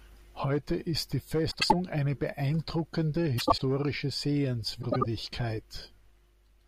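Frames out of order occur at 1.51–1.73 s, 3.38–3.61 s and 4.82–5.06 s. Each time, two adjacent blocks of about 96 ms, which fits four frames apiece, were decoded in swapped order. The speech garbles briefly, with no time lost.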